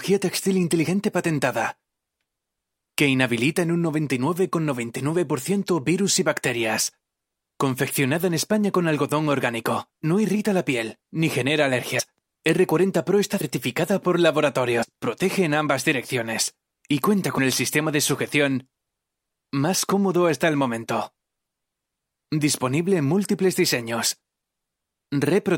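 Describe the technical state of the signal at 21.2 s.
At 21.2 s the signal is intact, with no dropout, distortion or other fault.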